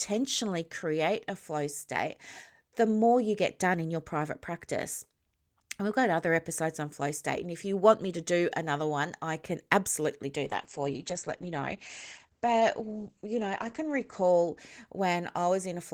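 After "I can absolutely do", a call bitrate drop runs from 10.46 to 15.51 s. Speech turns rough and muffled above 8 kHz, fitting a fall from 32 to 10 kbps.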